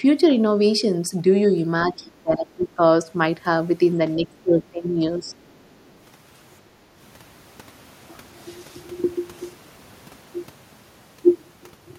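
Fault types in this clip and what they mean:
Speech suppressed in double talk: the voice dips sharply from 1.85 to 2.81 s, down roughly 25 dB at worst, and again more mildly from 4.16 to 5.35 s. This is likely an echo canceller mistaking overlapping talk for echo and turning everything down.
Other side's voice leaking through: a faint second voice, far below the main speech, surfaces from 5.28 to 5.95 s. The likely cause is the far end playing on the loudspeaker and reaching the microphone, with the echo canceller leaving some of it behind.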